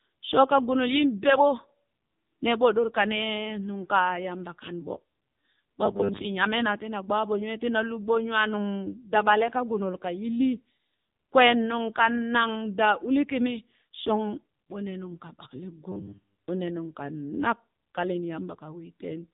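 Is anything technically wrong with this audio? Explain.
Yes. The speech has gone through the AMR narrowband mobile codec for its whole length. Nothing above 3.8 kHz survives, and the heavy damage gives a buzzy, synthetic voice. This fits AMR-NB at a low mode of about 6.7 kbps, where a vocal tract model and a few pulses stand in for the waveform.

There is also a robotic sound from repeated short buffers, from 5.86 to 6.25 s and from 15.92 to 16.48 s, the second just after "ɓo ne nungka ɓakale". It is a rigid 100 Hz metallic buzz, which points to a 10 ms segment being replayed. The likely cause is audio arriving too seldom, so that roughly half of the first stretch and most of the second is repetition and the real audio is skipped.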